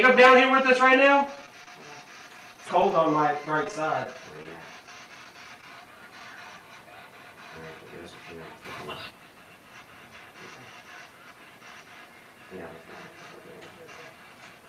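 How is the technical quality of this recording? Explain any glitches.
The recording has two network-related glitches in its first few seconds.

Repeated packet loss (robotic sound) runs from 1.35 to 1.82 s. Four holes, the longest 25 ms, were each patched by extending the preceding sound, so about 17% of that half-second is filler. It comes across as choppy.

Scattered short gaps follow from 2.38 to 6.21 s. Around fifteen isolated holes of up to about 20 ms are bridged by continuing the last sound, covering only a few percent of the stretch. Each is heard as a brief tick or smear.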